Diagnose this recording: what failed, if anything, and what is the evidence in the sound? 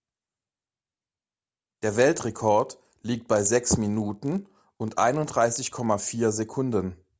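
A resampler restarted on every block fails at the sample-rate conversion stage. From 1.82 s to 6.06 s a 50 Hz buzz rides the speech: a tick every 20 ms at each block edge, where the converter lost its neighbouring samples, consistent with 44.1 kHz to 16 kHz conversion.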